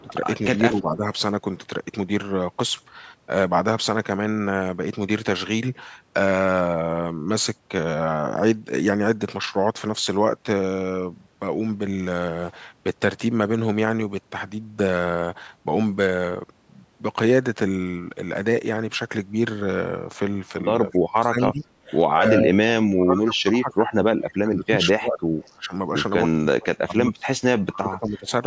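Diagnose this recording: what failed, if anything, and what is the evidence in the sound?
The call processing stage pulls the level down at 0.02–0.15 s and 0.56–1.05 s, by about 10 dB, then much harder, by about 30 dB, at 20.89–25.74 s and 26.39–28.3 s. This is likely speech suppressed in double talk. On a waveform the envelope sags or drops out in pieces. A spectrogram shows faded or missing bands.

Short echo leak bursts appear at 21.88 s and 25.41 s, each trailing the original by 238 ms at about 30 dB below the speech. The likely cause is a speakerphone echo canceller letting residue through. A spectrogram shows a faint, shifted ghost of earlier harmonic traces.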